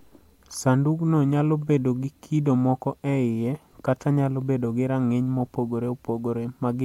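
There are no technical faults in this speech to describe in time order.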